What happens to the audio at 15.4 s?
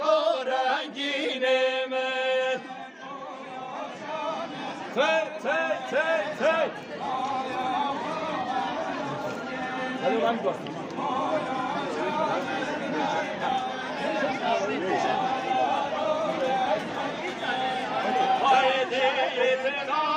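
Nothing goes wrong at 15.4 s; the audio is intact at that moment.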